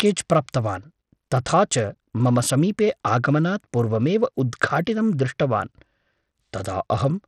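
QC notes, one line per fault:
Throughout, Bluetooth SBC compression: the link is likely carrying SBC with a small bit pool, consistent with roughly 80 kbps, so the top sub-bands are starved and the rest coarsely quantised. The speech's treble flickers and drops out beneath plainly audible gritty, aliased noise.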